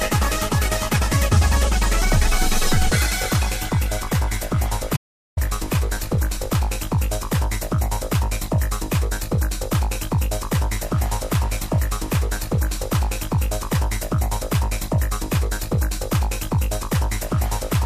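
At 4.97 s the sound cuts out abruptly. It returns at 5.37 s, also mid-flow. This is an audio dropout to silence. The gap lasts about 0.4 s. It is silent, with no room tone or background hiss underneath. Whatever was happening in those 0.4 s is gone, not just quieter. The likely cause is a brief loss of the input signal, such as a dropped link or momentary mute, while recording continued and wrote silence.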